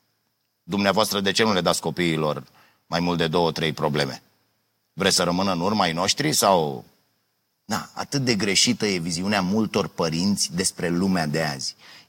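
No technical faults are audible anywhere in the speech recording.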